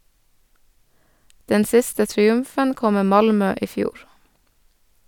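Nothing stood out on listening to the speech in this recording.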